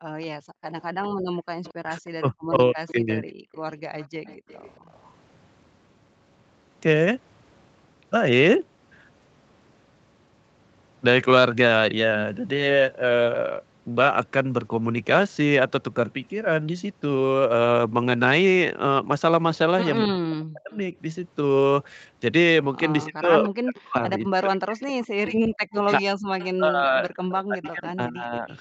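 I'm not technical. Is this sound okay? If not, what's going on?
No, there are three kinds of trouble in this speech recording, all from the part of a call system that tries to stop echoes.

Background gated by the echo canceller: the quiet room sound behind the voice suddenly sinks almost to silence, then comes back. This happens within the first 0.63 seconds, for roughly a third of a second in total, and again briefly from 3.42 to 3.52 s. Only the background drops out; it is not the voice being cut, which is what sets it apart from the double-talk problem below.

Echo leak: a faint, delayed copy of the talking trails behind the real voice by about a quarter of a second (224 ms), like a weak echo in a hall. It runs from 0.22 to 5.1 s, again from 23.03 to 23.78 s, and from 24.81 s to the end, where it is a little stronger. The likely cause is a loudspeaker on the other end whose echo wasn't fully removed before being sent back.

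Speech suppressed in double talk: the voice itself gets pushed down hard or cut out in pieces, from 1.84 to 3.25 s, from 20.02 to 20.94 s, and for about four seconds scattered across 23.05 to 28.48 s. Unlike the background dips, here it is the talker who vanishes. This likely happened because both sides were talking at once and the system muted everything.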